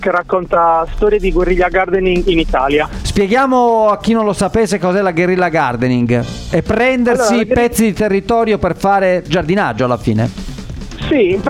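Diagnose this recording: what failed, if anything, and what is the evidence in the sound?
Nothing in the signal points to a failure at any stage of the chain, as there are no dropouts, clipping, glitches, level jumps or timing disturbances to be heard anywhere in the recording.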